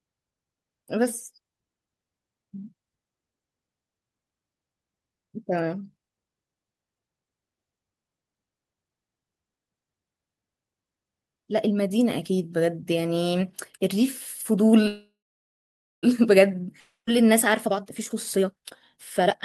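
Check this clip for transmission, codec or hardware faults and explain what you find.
Three transmission faults appear near the end of this speech clip.

From 14.87 to 16.05 s there is a call audio freeze, likely from packets stalling until the jitter buffer ran dry. The last sound is stretched into a fading buzz, then about 0.9 s of silence, before the speech resumes where it stopped, with nothing lost.

From 16.80 to 17.09 s a long network dropout follows, likely a stretch where no packets arrived at all. A brief fading fill gives way to roughly 0.1 s of silence, and the speech returns with about 420 ms of it gone.

From 17.10 s to the end, a jitter buffer speed-up occurs. The buffer is overfull after the backlog lands, so the receiver trims short pitch-period pieces repeatedly, roughly 0.7 s in all. The speech runs at 134% speed without any pitch change, sounding rushed.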